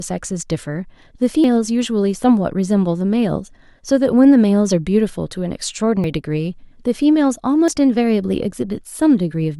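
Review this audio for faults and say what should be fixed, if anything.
The likely cause is a dropped buffer (overrun), where the capture side fell behind and the hardware overwrote samples before they were read. The speech jumps forward at 1.44 s and 6.04 s, each losing about a tenth of a second, and at 7.68 s, losing a shorter stretch of around 40 ms. Each join gives an abrupt skip with no gap of silence. Giving the capture thread higher priority or using larger buffers would prevent it.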